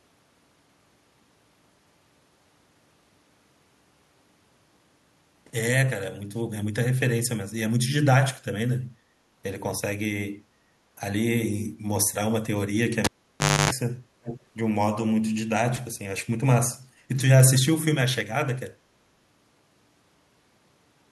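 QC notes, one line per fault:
13.05–13.71 s, cable pulled and plugged in: a pop, then about 0.61 s of near silence, including roughly 0.28 s of 50 Hz mains buzz, and a second pop as the speech returns. The live cable came out, and its bare tip touched first on reinsertion.
14.23–14.40 s, echo leak: a copy of the speech arrives about 399 ms behind the original, around 10 dB quieter. This is likely a far-end loudspeaker feeding its own microphone, with the echo canceller letting a fragment slip back down the line.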